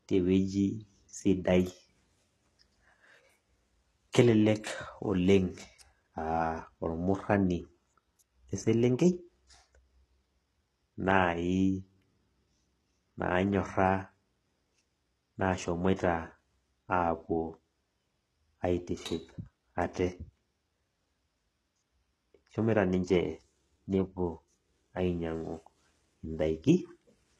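Across the whole speech clip the top end has a synthetic sheen: there's brightness up to about 12.3 kHz and nothing above it, but the s sounds come out gritty and lispy, with a metallic edge that doesn't sit with the lower harmonics. That's the signature of HE-AAC compression at a low rate, likely around 16 kbps, where the treble isn't coded at all but rebuilt by copying lower bands upward under a rough envelope.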